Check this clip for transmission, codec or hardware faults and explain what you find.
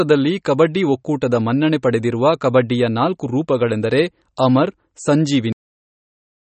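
Two faults stand out. Throughout, the speech is dull and watery with nothing above 8.3 kHz, likely MP3 compression at a starved bitrate, roughly 32 kbps. Weak frequency lines flicker between frames and the treble is cut. At 5.52 s there's a cut-off end: playback stops mid-sound and drops to dead digital silence with no decay, because the final buffers never reached the output.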